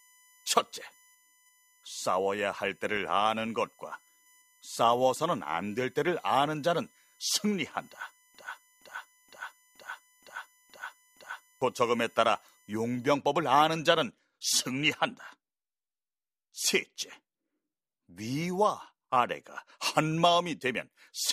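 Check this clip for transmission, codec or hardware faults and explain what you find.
Two faults are present: a USB whine and a broken-record loop.

From the start to 13.04 s, a USB whine sits under the speech. It is a fixed 1 kHz tone, strongest at its 23 kHz multiple, some 35 dB below the speech. USB frame current leaks through power or ground into the audio path.

From 8.35 s to 11.62 s, a broken-record loop takes over. A 470 ms fragment repeats exactly, back to back, seven times. The speech due in that span is lost. The likely cause is a stalled player, encoder or stream resending its last buffered piece.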